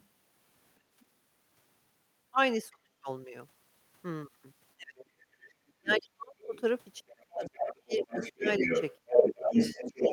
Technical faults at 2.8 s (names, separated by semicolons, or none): speech suppressed in double talk